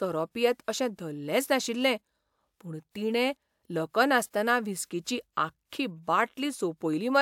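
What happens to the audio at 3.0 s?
Nothing goes wrong at 3.0 s; the speech carries straight through that moment with no dropout, click, distortion or other audible fault.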